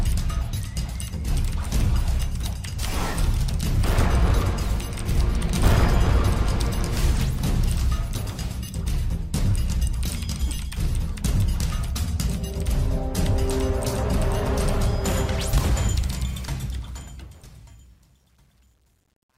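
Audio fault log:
16.18–19.37 s, truncation distortion on a fade: as the fade-out from about 16 s trails away, the level drops toward the smallest step of a coarse, undithered gain stage, consistent with 10 bits. From 17.23 s the tail turns gritty.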